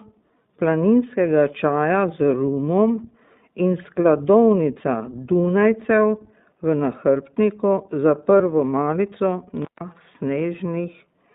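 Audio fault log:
throughout: iLBC codec. The speech is squeezed into roughly 150 Hz to 3.7 kHz, with a plainly rough, synthetic edge from independently coded 20 ms frames, which fits the 15.2 kbps mode.
8.38–8.41 s: lost iLBC frames. Right after "v nahrbtniku za", about one 20 ms frame drops out. The decoder repeats the last pitch cycle with noise, giving a brief buzzy held vowel before snapping straight back.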